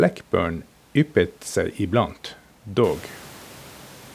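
No technical faults can be heard in the signal; the room's own background noise rises by about 18 dB around the three-second mark and still sits about 24 dB below the speech.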